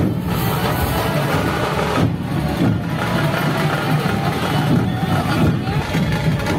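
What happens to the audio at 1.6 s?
Nothing goes wrong at 1.6 s: there is no dropout, click, distortion or other fault there, and the audio plays through that moment intact.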